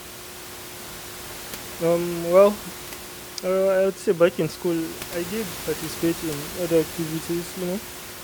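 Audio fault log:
No faults heard; the speech comes through as recorded.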